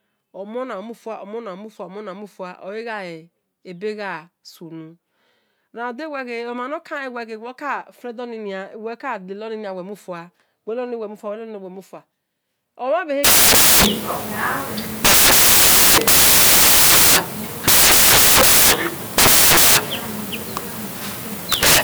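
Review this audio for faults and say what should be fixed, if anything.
From 13.24 s to the end, samples are built from the wrong bytes, so the low bits dominate and the speech becomes loud, harsh broadband noise. Fix the reader's byte order and alignment so every sample is assembled from its own bytes, starting on a true sample boundary.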